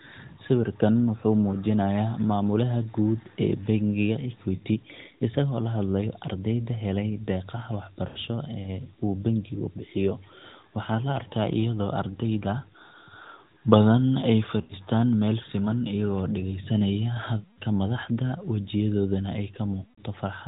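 Radio errors corrupted runs of speech frames on this AMR narrowband mobile call, producing lost AMR speech frames at 4.56, 8.08, 14.62 (after "badan ay"), 17.40 and 19.84 s. Each time the decoder stretches the last good speech sound and fades it, leaving drawn-out dropouts of 60 to 180 ms.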